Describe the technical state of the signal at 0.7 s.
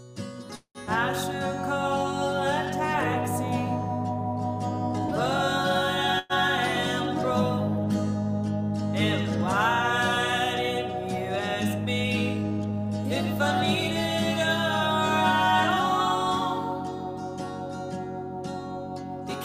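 At 0.7 s the signal is inside a call audio freeze running from about 0.55 to 0.78 s. The sound stops advancing and the last moment is stretched into a fading buzz that drops to silence for roughly the final 90 ms of a 194 ms filled stretch. Packets were likely delayed and the jitter buffer ran dry. When they arrive the audio resumes where it halted, nothing lost but now running about 194 ms late.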